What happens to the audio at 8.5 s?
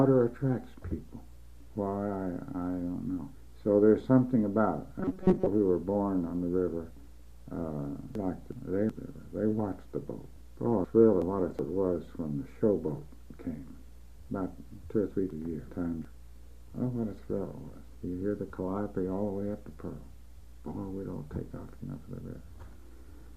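Frames out of order run from 8.15 to 8.90 s. Two adjacent blocks of about 372 ms each were decoded in swapped order, consistent with runs of four frames, so the stretch plays its halves exchanged as a garbled flutter, with no time lost.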